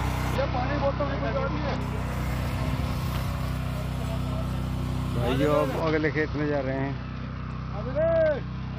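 Bluetooth SBC bit pool drop from 0.35 to 1.81 s and again from 5.80 s to the end: the bit pool sinks, likely from 31 to about 8 (roughly 66 kbps), starving the upper sub-bands, so treble dulls and gritty quantisation noise rises.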